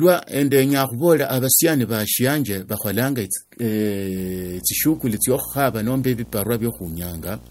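From 4.16 s to the end, a harsh 60 Hz buzz with hash above it sits well below the speech: video or display buzz, from a screen or video cable coupling into the audio.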